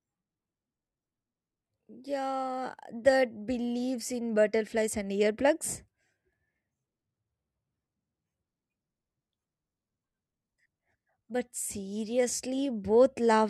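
No technical faults can be heard anywhere in the speech. There is nothing here that needs a timestamp or a fix.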